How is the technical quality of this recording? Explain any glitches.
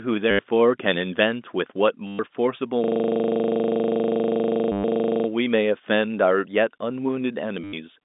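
The recording has two kinds of fault: four brief packet-loss stutters and one long system hang loop. It sits on a telephone line band of about 200 Hz to 3.7 kHz, as expected for G.711 telephone coding.

Packet loss with last packet repeated occurs at 0.31–0.39 s, 2.07–2.19 s, 4.72–4.83 s and 7.64–7.73 s, lasting 80 to 120 ms. The receiver replayed its last packet until fresh ones arrived, which fits roughly 10 ms packets. Each gap becomes a robotic buzz near 100 Hz.

A system hang loop runs from 2.84 to 5.28 s. The machine froze while the sound hardware kept cycling one 40 ms stretch of buffer, repeating it about sixty times. The result is a rattling machine-gun stutter at 25 Hz, and the packet-loss stutter at 4.72 s lands inside it.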